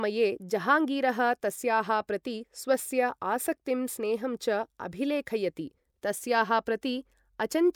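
No technical faults can be heard anywhere in the recording.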